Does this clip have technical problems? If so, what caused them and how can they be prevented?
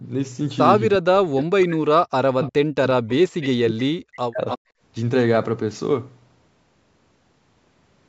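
Yes, there are several faults in this speech clip.

Sample clock jitter runs through the whole recording. The converter's clock wanders by around a microsecond, so each sample is taken slightly off time. Steep, fast-moving parts of the waveform turn that timing error into amplitude error, roughly 45 dB below the signal. Unlike ordinary background hiss, this roughness follows the speech, growing on loud and bright sounds and disappearing in pauses. A stable, low-jitter clock for the converter prevents it.

Speech suppressed in double talk affects about 3 seconds between 0.96 and 4.4 s. The speech dips by up to about 40 dB. The likely cause is that both sides talked at once and the echo canceller, unable to separate the local talker from loudspeaker echo, turned everything down. It differs from background gating because the speech itself is cut, not only the room sound. A canceller with better double-talk detection, or a headset instead of a loudspeaker, prevents it.

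Echo leak appears three times: 2.43 to 2.5 s with a delay of 357 ms, 3.41 to 3.47 s with 302 ms, and 4.48 to 4.58 s with 302 ms. The first two sit about 20 dB below the speech, and the last is stronger at about 10 dB below. Each is a short, delayed copy of speech, likely loudspeaker sound that the far side's canceller failed to remove. The delay of roughly a third of a second sets it apart from room reverberation, which smears sound without a distinct repeat. Better echo cancellation or headphones on the far end prevents it.

Background gated by the echo canceller shows at 4.68 to 4.81 s. The room sound drops by up to 22 dB for about 150 ms and then comes back when the canceller releases the microphone after loudspeaker playback. It differs from double-talk suppression because only the ambient background vanishes, briefly, rather than the speech fading over a longer stretch. Gentler suppression with comfort noise to fill the gaps prevents it.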